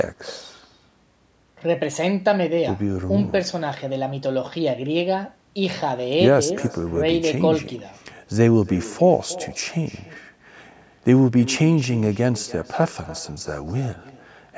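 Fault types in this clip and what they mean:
Echo with no canceller: the far end is playing this speech over a loudspeaker, its microphone picks it up, and nothing subtracts it, so every phrase returns around 300 ms later at about 18 dB below the original, sounding thinner. Unlike ordinary room reverberation, which smears directly into the sound, this is a distinct, delayed repeat, and it stays present across the clip rather than fading in and out as a struggling canceller's leftover echo would.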